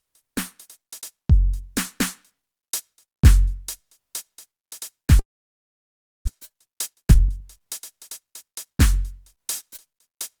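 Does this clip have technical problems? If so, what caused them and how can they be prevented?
Yes. From 5.19 to 6.29 s the music briefly smears on, then falls silent for about a second before resuming with about 0.6 s missing. This is likely a long network dropout. Prevent it with a more reliable network path or forward error correction.

From 6.34 to 8.85 s the music rushes ahead at about 117% speed with unchanged pitch, losing its steady tempo. This is a jitter buffer speed-up: delayed audio arrived together, and the receiver trimmed around 0.4 s in small pitch-period pieces to reduce the backlog. Prevent it by reducing network jitter so the buffer doesn't overfill.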